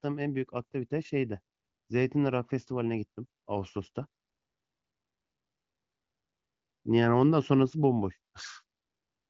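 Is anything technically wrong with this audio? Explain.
No, nothing is wrong: this is speech carried over AMR wideband (HD Voice) at 18.25 kbit/s, a rate high enough that the codec leaves at most faint traces, and the empty band above 7.5 kHz is simply the normal limit of that codec.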